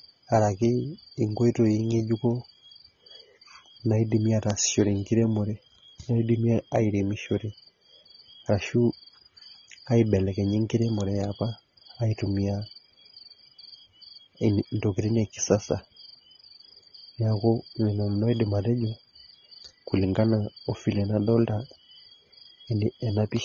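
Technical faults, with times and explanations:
Throughout, AAC compression: the speech sounds plainly dull and smeared, with a warbling, fizzy edge on sibilants and sustained sounds. The likely cause is AAC-LC at a rate that fits about 24 kbps, where too few bits lower the cut-off and thin the spectrum.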